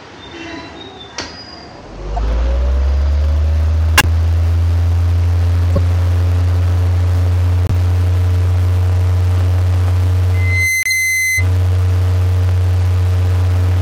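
Everyday sound here, with two separate problems. First, corrupt frame decoded: damaged compressed frames got played anyway, so there are short noisy blips and chirps at 2.16–2.19, 3.98–4.05, 5.76–5.78, 7.65–7.71 and 10.83–10.92 s. Each spans roughly one to a few frames and peaks around -5 to -10 dBFS. Second, a loudspeaker feedback squeal from 10.34 to 11.46 s: a 2 kHz tone swells up over roughly 0.4 s to about the same level as the sound itself, as the mic-to-speaker loop runs away at that frequency.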